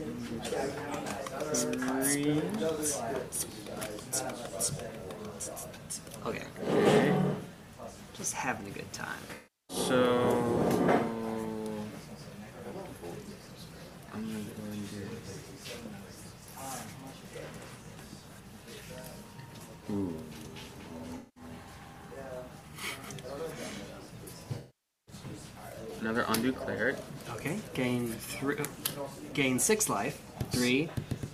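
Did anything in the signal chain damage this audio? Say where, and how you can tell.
Yes. The audio has three patches where the sound turns smeared, noisy or phasey instead of continuing cleanly: 9.35–9.77 s, 21.17–21.44 s and 24.58–25.15 s. The longest is about half a second. This is AAC frame loss with concealment at the codec stage. Frames were lost in transmission or storage, so the decoder rebuilt each gap from the last good spectrum, using scrambled signs or interpolated energy, rather than from real data.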